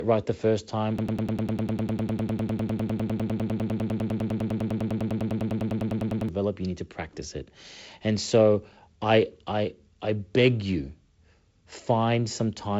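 From 0.99 s to 6.29 s, just after "right the first time", a broken-record loop replays the same 0.1 s fragment about ten times a second, with the G.722 wideband band limit still audible. A stalled stream likely kept resending its last buffer, losing the intervening audio until "you need to practice".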